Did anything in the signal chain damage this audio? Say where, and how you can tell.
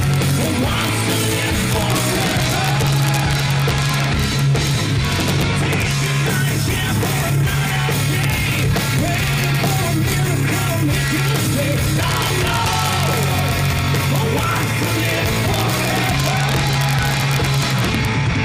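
Yes. Integer overflow occurs throughout, at a fixed-point gain or sample-format conversion stage. The signal is driven about 3 dB past full scale, and instead of being limited, the rare peaks that exceed it wrap to the opposite sign. Those peaks, a tiny fraction of samples, produce sharp cracks harsher than clipping.

Compressed frames were skipped at the codec or storage stage at 6.90 s. The audio jumps forward by about a tenth of a second, which fits a few lost frames.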